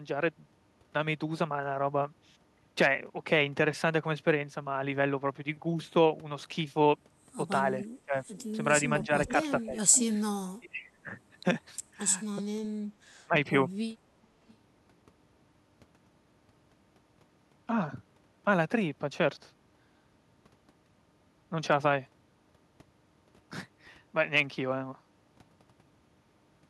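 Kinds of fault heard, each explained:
Echo leak: Faint scraps of the speech come back about 423 ms after the original, roughly 10 to 25 dB below it, between 7.8 and 10.04 s, longest from 9.27 to 9.62 s. The likely cause is a loudspeaker whose echo canceller let part of its pickup return.
Speech suppressed in double talk: The speech dips sharply, by around 15 to 25 dB, at 8.05 s, from 9.05 to 9.98 s, from 10.6 to 11.07 s and at 13.26 s. An echo canceller likely mistook overlapping talk for echo and turned both its talker and the echo down.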